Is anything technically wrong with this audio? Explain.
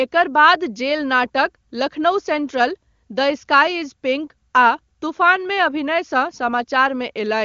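No, nothing wrong here: the speech passes through the AMR wideband (HD Voice) codec at its top rate of 23.85 kbit/s, where any coding damage is faint at most.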